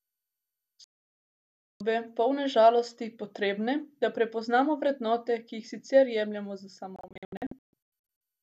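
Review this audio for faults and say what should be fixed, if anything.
Digital broadcast dropout silences the speech from 0.84 to 1.81 s, resuming at "polne žalosti potrebne da", then breaks it into short holes between 6.96 and 7.73 s, the longest 144 ms. The receiver lost valid frames and muted until good ones returned. A stronger received signal or more robust error protection would prevent it.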